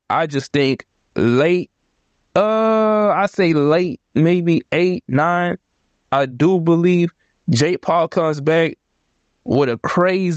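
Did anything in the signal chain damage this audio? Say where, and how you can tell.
Yes. Gain pumping runs through the whole speech clip. The gain ducks by about 20 dB under each loud syllable. Levels are squashed together. The likely cause is input gain set far too high, with a fast limiter clamping it.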